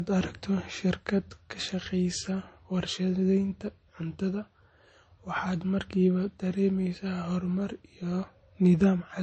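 Transcoding between lossy codecs, throughout: the speech stops near 8.4 kHz, with layered smearing and swirling artefacts, likely from low-rate MP3 re-encoded as Vorbis.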